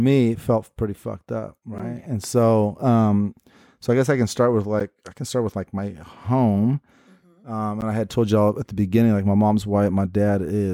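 Gaps between chunks hit at 1.78 s after "felt pretty fucked up", 4.80 s after "I can start with", and 7.81 s before "and I had told". Speech is split into 3-second chunks with 12 ms of silence at each join. Each one is a brief hole.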